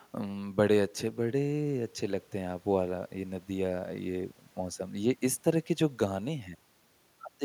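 Nothing in this bit of speech trips any alarm, since no technical fault turns up anywhere along the way.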